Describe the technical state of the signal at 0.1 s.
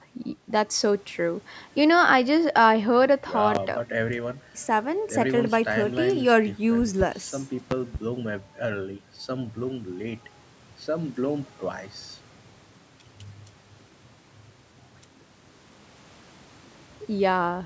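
At 0.1 s the speech signal is intact, with only the ordinary call microphone processing trimming the deepest bass as expected.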